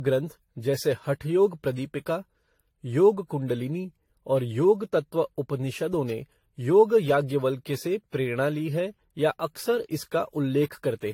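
From start to finish the speech carries generation loss: a swirly, hollow, smeared quality with blurred consonant attacks and nothing above 16.6 kHz. The likely cause is repeated lossy re-encoding, around seven passes, consistent with an AAC-LC chain near 64 kbit/s.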